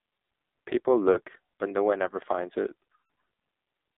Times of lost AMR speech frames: 1.12-1.21, 2.88-3.03

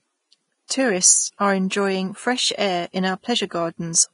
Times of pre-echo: 0.68-0.70

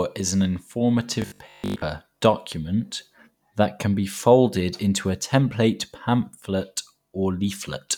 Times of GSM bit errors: none

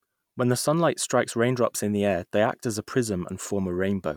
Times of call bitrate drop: none

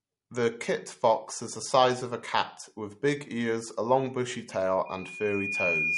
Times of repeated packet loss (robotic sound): none

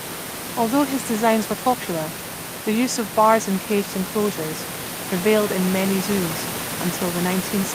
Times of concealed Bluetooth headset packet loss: none

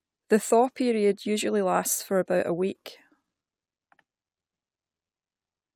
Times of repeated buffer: none

